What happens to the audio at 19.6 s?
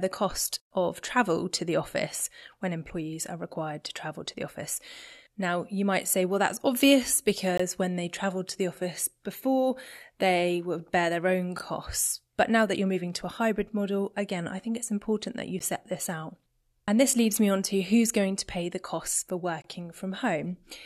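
Right after "pay the costs for", there's a gap between stream segments from 19.62 to 19.64 s: mismatched timestamps leave a roughly 22 ms hole of silence with hard edges.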